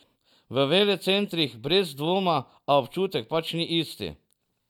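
Nothing in this speech recording stood out as a technical problem on listening.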